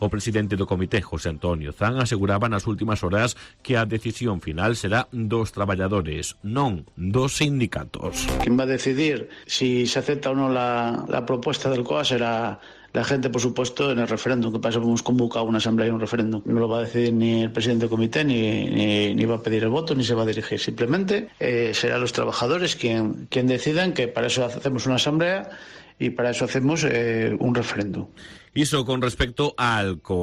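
No technical faults are audible anywhere in the audio.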